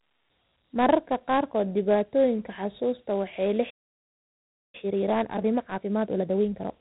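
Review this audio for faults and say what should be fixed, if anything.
The audio was stored as Dialogic VOX ADPCM at a 4-bit rate consistent with 32 kbps. The band stops near 3.9 kHz, and plainly audible gritty hiss trails the speech. Prevent it by keeping a wideband source rather than a telephone-grade VOX file.

A playback stall runs from 3.70 to 4.75 s. The player was likely starved of data or blocked, so the speech cuts to silence for about 1.03 s mid-flow. Prevent it with deeper buffering and a playback thread that nothing else can block.

A time-compressed catch-up follows from 4.75 to 6.71 s. To clear the backlog, the player splices out small pieces and cross-fades them, so the speech runs at 1.5 times normal speed at unchanged pitch. Prevent it by fixing the stall, since without the backlog the player has nothing to catch up on.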